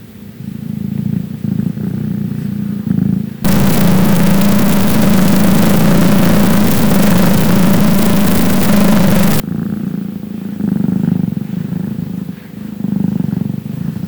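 From 3.45 to 9.40 s, a stuck bit, likely from a broken data line, pushes about half the samples off value, producing distortion.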